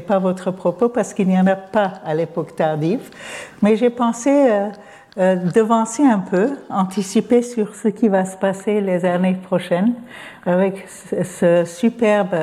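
From 7.65 to 11.56 s, one channel arrives a few samples late, around a tenth of a millisecond, and the two are summed to mono, causing channel delay (comb filtering). Cancellation begins near 5 kHz, leaving the sound hollow.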